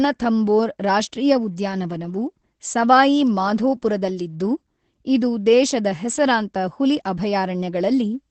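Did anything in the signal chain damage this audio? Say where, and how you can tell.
Yes, at the codec: Opus voice compression throughout. Nothing sounds above about 8.6 kHz, and the speech is hoarse and slightly robotic, which fits SILK at roughly 12 kbps. A plain low-pass would leave the remaining band clean.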